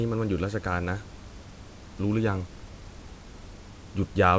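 No technical faults can be heard in this speech.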